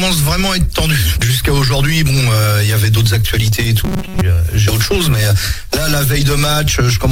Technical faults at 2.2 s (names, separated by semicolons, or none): none